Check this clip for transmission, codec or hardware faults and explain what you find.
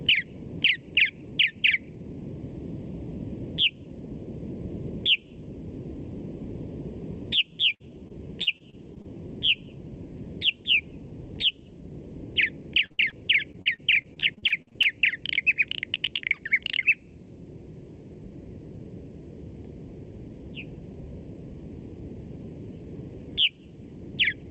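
Yes, there's real damage here, all of it packet loss on an Opus call path, clustered in two rough stretches with a dense tangle of smaller losses between them. The path caps the audio at about 8 kHz, and the codec's coding noise sits under everything.

Repeated packet loss (robotic sound) hits twice. From 7.35 to 9.10 s there are seven dropouts, the longest 59 ms, covering around a tenth of that stretch. From 13.52 to 14.90 s it's worse: thirteen dropouts, the longest 47 ms, with nearly a quarter of the span patched. Each hole gets filled by stretching the last bit of sound, and the next hole arrives before things settle. The result is a choppy, mechanical texture with chunks missing.

Lost packets rebuilt from error correction show up at 12.80, 12.98 and 13.04 s, each a single 20 ms frame. The packet that arrived next carried a low-bitrate backup copy of the lost one, and the decoder played that copy. 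So there's no gap at these points, but those frames come out rougher and noisier than the audio around them.

Short concealed packet loss appears at 12.86 to 12.92 s, about 40 ms, and again at 13.10 to 13.14 s, about 20 ms. The receiver covered each hole by extending the previous sound, either from its pitch or as shaped noise, then blended back into the real signal. You hear a quick smear or wobble, and anything very brief in there can vanish.

A burst of packet loss runs from 12.92 to 13.00 s, right on the heels of the first short loss, with about 60 ms of audio gone. The receiver continued the last sound and faded it down across the gap before the real signal picked up again further along. That gives a held or fading tail, then a jump past the missing piece.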